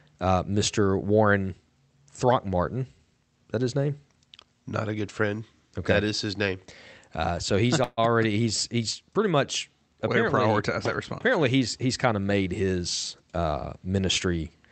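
At 7.83 s, right after "so he's", the speech stalls in a call audio freeze lasting until 7.99 s, likely because packets were delayed and the jitter buffer ran dry. For about 139 ms the receiver stretches the last sound into a fading buzz, then about 10 ms of silence, before "he's he's pretty much" resumes with nothing lost, only pushed later. On a spectrogram, already capped near 8 kHz by the call codec, the frozen stretch appears as smeared, decaying horizontal bands ending in a thin blank gap.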